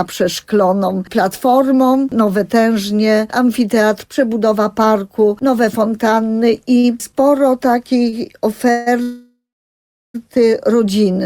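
Short stalls from a late packet occur at 6.79 s and 8.09 s. The jitter buffer ran dry, so the last sound is held for about 41 ms and then 31 ms, a brief smear with a faint buzz, before playback resumes with nothing lost.

Call audio freezes follow at 8.71 to 8.88 s and 9.02 to 10.16 s, likely from packets held up in transit. The first stretches the sound into a fading buzz for 151 ms. The second holds for 1.12 s, ending in about 730 ms of silence before the audio picks up where it stopped.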